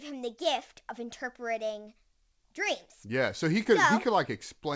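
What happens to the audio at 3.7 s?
Just after "so he", a short concealed packet loss at 3.64 to 3.67 s: 20 ms never arrived, so the receiver stretched the preceding sound across the gap, leaving a brief smear.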